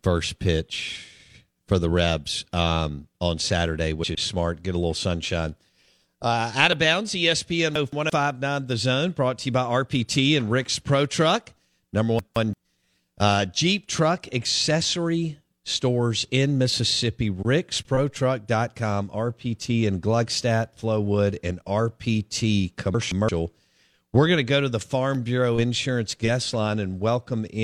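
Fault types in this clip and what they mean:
Compressed frames skipped: Damaged or missing coded frames are dropped. At 4.02 s, just before "is smart", about 100 ms vanishes.
Chunks out of order: A 170.67 ms block plays one chunk late. At 7.76, 12.19 and 22.94 s the sound briefly jumbles.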